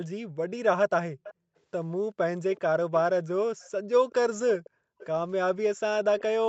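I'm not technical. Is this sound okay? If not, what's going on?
No. There are five brief echo leaks: a faint, delayed copy of the speech comes back at 1.23, 2.55, 3.6, 4.64 and 4.98 seconds, each lasting about a tenth of a second. Every copy trails the original by 383 milliseconds and sits well below it, quietest at 3.6 seconds. The likely cause is a loudspeaker on one end of the call whose echo canceller missed short scraps of what its microphone picked up and sent back.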